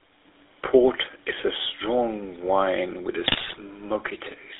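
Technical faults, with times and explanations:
throughout: GSM full-rate codec. The audio passes through a vocal-tract model driven by regular pulses at a rate that fits 13 kbps full rate, on a 300 Hz to 3.7 kHz line band. The excitation is thinned, so the speech sounds plainly buzzy and gravelly, with no top end.
3.26 to 3.61 s: GSM bit errors. Flipped bits, at a rate of a few percent, corrupt the decoder's filter, pitch and gain values, consistent with around 17 damaged frames in a row. The speech breaks into squawks, pops and gargling as the spectrum and level jump from frame to frame.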